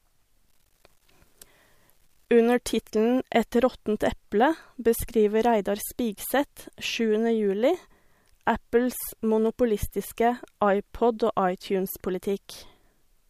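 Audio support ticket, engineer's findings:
Grainy, signal-following distortion on speech, 0.49–2.42 s; quiet tails gritty, lowest levels sputtering. Likely low bit depth without dither: rounding with no dither, consistent with about 10 bits, error tracking the signal at roughly 45 dB below it.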